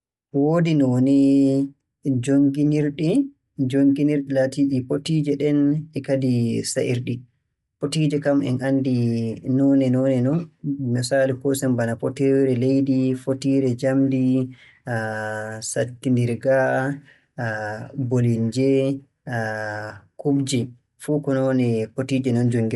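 The speech was likely passed through Bluetooth LC3 compression throughout. The codec thins out and noise-fills upper bands, which fits a 48 kbps link. Nothing reaches above 11.5 kHz, and the voice carries a plainly audible breathy, grainy edge.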